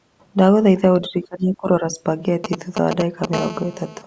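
From 1.01 to 1.98 s the speech repeatedly dips by up to about 25 dB, losing roughly 0.7 s in chunks. This is likely speech suppressed in double talk, an echo canceller ducking the near talker while the far side spoke. Unlike a dropout, the gaps track another talker's activity.

From 2.44 to 3.26 s, GSM signalling bursts appear as a galloping dit-dit-dit of short 217 Hz buzzes, roughly 5 dB below the speech. A nearby 2G phone is exchanging brief radio bursts, which the audio circuit rectifies. The groups of bursts, not a continuous tone, mark it as signalling.

From 3.33 to 4.02 s, a GSM phone buzz takes over: a hard, raspy, harmonic-rich buzz at 217 Hz, about 12 dB below the speech. It is the rectified transmission pulses of a 2G phone in an active call. It is steady, unlike the galloping bursts just before it.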